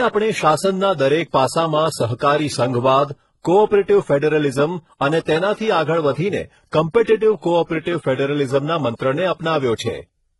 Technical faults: transcoding between lossy codecs

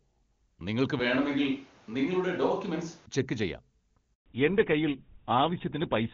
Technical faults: switch to a distant microphone; handover gap; fallback to narrowband

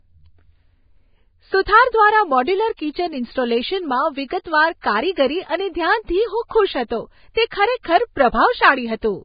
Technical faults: Vorbis compression

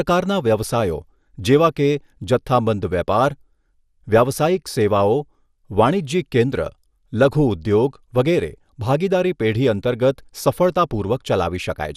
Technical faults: MP2 compression

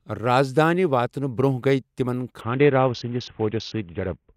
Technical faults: Bluetooth SBC bit pool drop

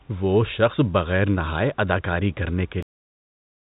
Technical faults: cut-off end

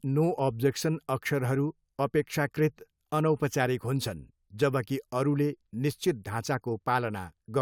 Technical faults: none

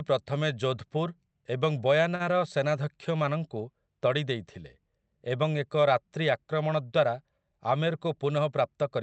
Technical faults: short stall from a late packet; jitter buffer speed-up

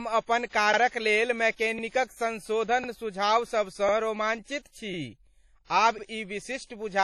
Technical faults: WMA compression; pre-echo

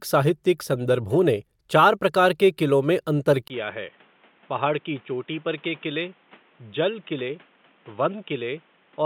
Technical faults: input switched to a poorer device

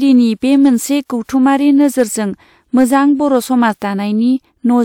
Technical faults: hard clipping

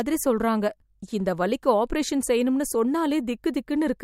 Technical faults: none

